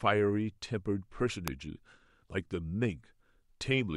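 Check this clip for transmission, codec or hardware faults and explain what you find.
One fault is audible in the speech: an electrical switching spike at 1.48 s. A single sharp snap, peaking around -10 dBFS, sits on top of the speech, likely from a nearby switch or discharge arcing into the line. Unlike a dropout click, nothing goes missing; the speech continues unbroken underneath.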